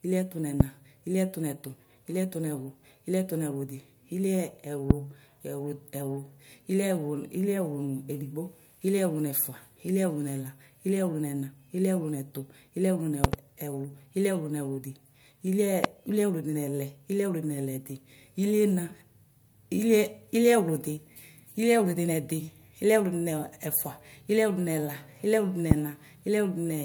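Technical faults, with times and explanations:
0.60–0.63 s, 4.91–4.93 s, 13.24–13.36 s (double), 15.84–15.87 s, 25.71–25.74 s: loud pop, sharp thumps about 25 dB above the speech, likely from electrical voltage steps. The speech continues underneath rather than dropping out.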